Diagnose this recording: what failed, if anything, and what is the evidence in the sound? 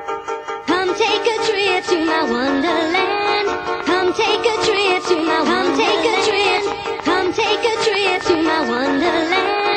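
Interference, likely in the analogue wiring, injects a train of clicks: regular pops at 7.3 per second from 3.26 to 9.74 s, about 10 dB above the sound.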